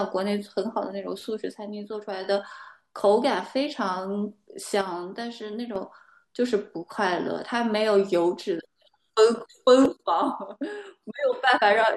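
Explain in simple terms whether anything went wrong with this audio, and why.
Three times the speech suddenly drops to a noticeably quieter level and then jumps back up: from 1.52 to 2.24 s, from 4.81 to 5.76 s, and from 9.86 to 11.47 s. The likely cause is one channel dropping out. The recording was made in stereo, with a left and a right side. When one side briefly goes silent and the two are combined for playback, only half the sound is left, so the speech abruptly gets quieter until that side returns.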